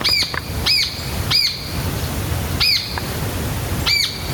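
The input gain is likely set far too high for the microphone, so a fast limiter or compressor keeps clamping down on every loud moment. The result is gain pumping across the whole clip: the level ducks by something like 10 dB as soon as a loud sound arrives. Loud and quiet passages sit unnaturally close in level, giving the audio a squashed, breathing quality.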